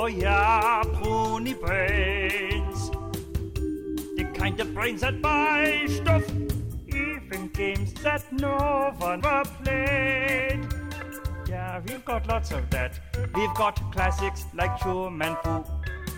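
At 9.19 s and again at 11.18 s, damaged data in the compressed stream makes the decoder misread frames and lose sync, producing brief glitches. Each shows as an abrupt discontinuity in the waveform.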